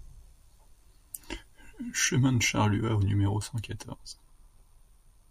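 From 1.94 s to the end, crude rate conversion adds gritty inharmonic fizz, faint beneath the speech; spectrograms show stray aliased lines, fitting linear interpolation from 48 kHz to 44.1 kHz.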